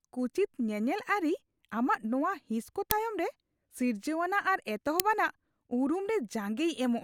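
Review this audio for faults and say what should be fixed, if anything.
Uninitialised buffer at 2.91 s and 5.00 s: a loud crack lasting about 2.7 ms each, consistent with an unwritten 128-sample block. Zero-fill buffers on allocation and only queue them for playback after audio has been written.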